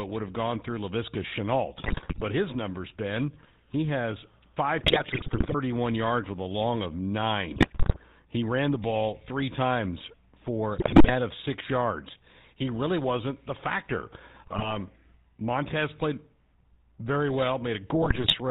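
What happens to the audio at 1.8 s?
GSM bit errors strike from 1.78 to 2.23 s: corrupted filter, pitch and gain values distort the spectrum and spike the level frame by frame, so speech breaks into squawks, pops and gargling. Underneath, the GSM full-rate codec keeps everything band-limited below 4 kHz, with its pulse-driven excitation lending the speech a buzzy, gravelly roughness.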